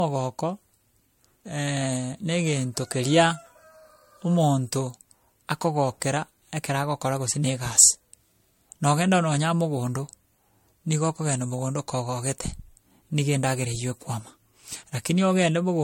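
From start to finish the speech has a swirly, hollow, smeared quality, with consonant attacks blurred and a watery shimmer around the words. Nothing comes through above 16.6 kHz. That points to generation loss, likely from MP3 being decoded and re-encoded about four times at a rate that fits roughly 64 kbit/s. Each pass quantises on a shifted frame grid, so the noise and spectral holes pile up beyond what one encode would cause.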